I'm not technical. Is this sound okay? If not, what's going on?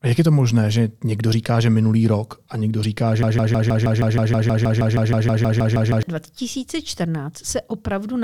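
No. From 3.23 to 6.03 s the speech snags on a tiny scrap about 0.16 s long and repeats it 18 times, like a stuck record. This broken-record loop likely comes from the player or stream stalling, and whatever belonged there is lost.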